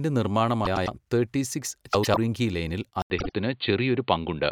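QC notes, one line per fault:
0.65–0.88 s, 1.93–2.17 s, 3.18–3.31 s: frames out of order. Two adjacent blocks were played in reversed order, about 105 ms each in the first two events and 52 ms in the third. Each stretch sounds like a garbled flutter, and no time is lost.
3.02 s to end: input switched to a poorer device. After an 80 ms dropout the sound turns dull and boxy with nothing above 4.6 kHz, while the level stays about the same. A faint new noise floor, roughly 50 dB down, appears. This is likely a change to a narrower-band microphone or headset path.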